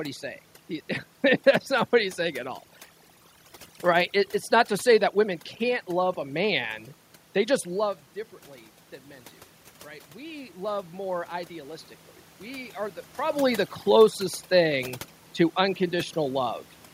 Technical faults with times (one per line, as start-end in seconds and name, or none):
0.00-16.93 overdone noise removal
10.12-13.05 automatic gain rising